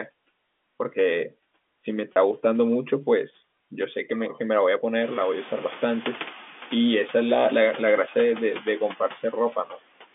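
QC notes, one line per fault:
Throughout: noise suppressor artifacts. The suppressor pulls down bands it judges to be steady noise, by about 15 dB, frame by frame. The background dips between phrases and swells beneath them, and the effect grows more noticeable after the room noise climbs about 16 dB near 5 s.
2.14–2.16 s: packet loss with pitch repetition. About 30 ms of audio goes missing, which fits a single lost packet. The receiver bridges it by repeating the last pitch period, so the sound briefly holds on a slightly buzzy, sustained tone before continuing.
9.65–9.78 s: speech cut by the noise suppressor. For about a tenth of a second the suppressor mistakes part of the speech for background and turns it down with the noise, by about 11 dB at the deepest point. That stretch sounds swallowed and faint within the narrow telephone band.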